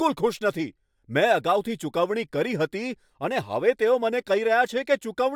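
No audible faults appear anywhere in the recording.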